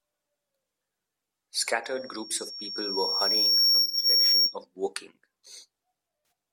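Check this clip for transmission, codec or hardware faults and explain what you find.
Two kinds of fault are present: a feedback squeal and AAC frame loss with concealment.

From 1.84 s to 4.57 s there is loudspeaker feedback squeal. The loop gain exceeds one at 5.5 kHz. The tone builds over about two seconds to roughly 10 dB above the speech.

AAC frame loss with concealment occurs at 3.82 to 4.05 s and at 6.23 to 6.31 s. The decoder fills the gaps from the last good spectrum, leaving brief smeared, phasey patches.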